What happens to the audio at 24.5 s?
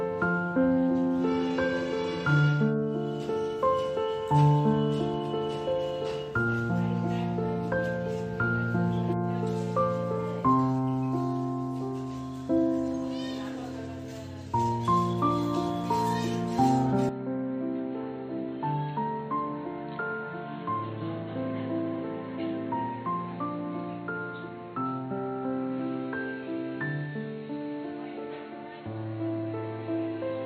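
At 24.5 s the sound is dull and boxy: from 17.09 s onward the input has likely switched to a poorer device. A spectrogram shows nothing above 4.3 kHz, with a faint new noise floor, and the waveform drops roughly 10 dB with no gap at the switch.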